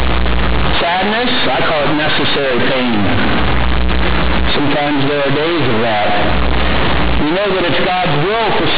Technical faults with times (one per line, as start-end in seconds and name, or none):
0.00-8.77 companded audio read as linear